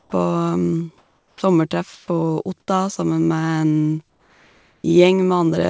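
Speech in which the pauses at 0.00–0.12 s, 0.98–1.42 s, 1.94–2.08 s, 2.60–2.68 s and 4.10–4.84 s carry comfort noise in place of the background. The real room sound gives way to a steady, featureless hiss, about 10 dB quieter in the pause at 0.98 s and up to about 4 dB louder or quieter in the others, likely from discontinuous transmission. Unlike a noise gate, which leaves silence, these gaps are filled. At 1.31 s, the onset is likely clipped by the voice detector: 110 ms of the start is replaced by that same noise, so the sound begins abruptly. Unlike packet loss, there is no mid-sound gap, only a missing soft beginning. Nothing reaches above 8 kHz, consistent with a wideband call codec.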